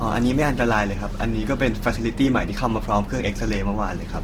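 A speech clip with plainly audible damage from start to finish. The sound is grainy and rough. Tonal parts turn noisy rather than swirly. There are few gaps in the spectrum, and the top end reaches to about 20.2 kHz. The likely cause is Opus compression in its music (CELT) mode, at full bandwidth. Starved bands are refilled with folded or noise content. The coarseness points to a low bitrate, around 16 kbps.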